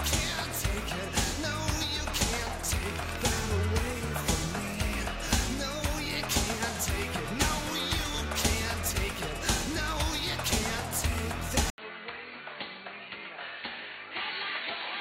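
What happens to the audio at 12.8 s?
From 11.7 s to the end, after an 80 ms gap, the sound turns dull and about 10 dB quieter, with the spectrogram empty above 4.5 kHz: likely an input switched to a poorer device.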